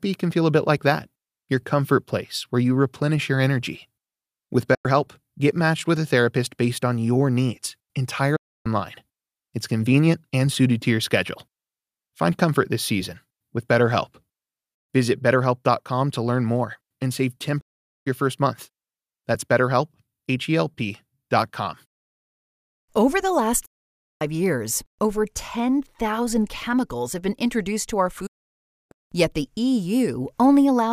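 At 4.74, 8.36, 17.61, 23.66 and 28.26 s, digital broadcast dropouts occur. The receiver lost valid frames and muted after an 8 ms fade. The holes grow from 96 to 640 ms, consistent with 32 ms frames, and appear as flat silent gaps in the waveform and blank vertical bands on a spectrogram.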